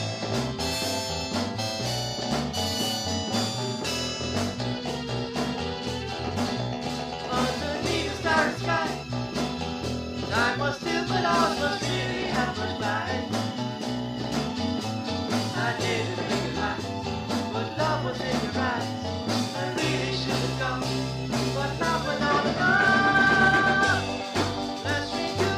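Nothing here trips the ear at any point; there's no technical fault to point to anywhere in the audio.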